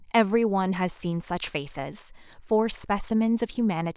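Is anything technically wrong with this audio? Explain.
No, nothing technically wrong can be heard here.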